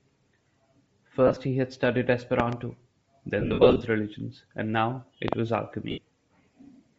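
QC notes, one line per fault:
Throughout: Bluetooth LC3 compression. The speech has a plainly audible breathy, grainy edge. The cause is likely LC3 coding at a bitrate around 32 kbps in 7.5 ms frames, where the upper spectrum is discarded and refilled with noise.
1.27–1.37 s, 3.40–3.81 s, 5.91–5.98 s: lost LE Audio frames. Short dropouts are scattered across each span, about 50 ms within 90 ms first, the longest run around 30 ms. The second span loses about 255 ms within 405 ms, with runs up to about 50 ms, and the third about 68 ms. The decoder repeats the last spectrum with randomised signs, so the speech smears into noise and fades during longer gaps.
2.40–2.55 s, 5.28–5.35 s: loud pop. Each region has a double pop, roughly 20 dB above the speech, which continues underneath. This is likely a sudden voltage step or pulse from a switch, plug, static or driver glitch, shaped by the following circuitry into sharp clicks.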